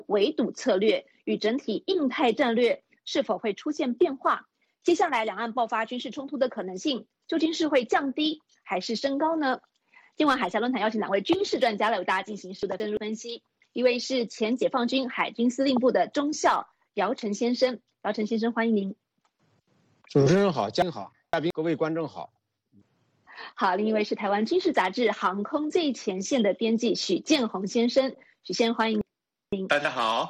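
The audio has chunks out of order at 12.63–12.97 s, 20.82–21.50 s and 29.01–29.70 s: segments of about 171 ms play one, then three, positions late, producing a jumbled passage with hard joins.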